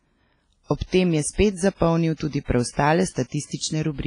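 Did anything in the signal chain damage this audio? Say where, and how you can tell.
Yes, at the codec: the speech rings throughout with washy hiss that breathes along with it, likely WMA compression near 24 kbps. A spectrogram shows nothing above 10.1 kHz.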